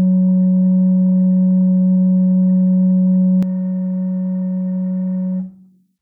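Music here, and from 3.43 s to the end at 6.01 s it turns thin, bright and hissy: pre-emphasis left on, a J.17-style treble boost never undone, about 11 dB up at 10 kHz.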